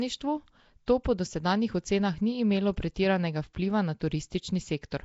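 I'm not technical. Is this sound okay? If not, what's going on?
No. Throughout, the speech sounds rough and hissy, underwater, with nothing heard above about 7.7 kHz. This is likely Nellymoser compression, an old Flash-era microphone codec that squeezes sound into small chunks and fills the weak parts with noise.

At 0.86 s there is a brief pre-echo: a short hiss comes just before a sharp sound, softening its start. The codec spreads its noise across a whole chunk, so the quiet moment before a sudden loud sound fills with hiss.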